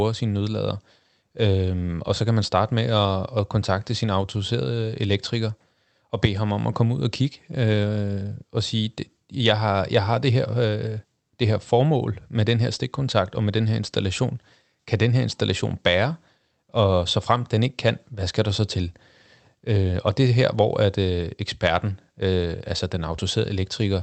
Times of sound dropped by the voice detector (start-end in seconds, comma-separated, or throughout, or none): none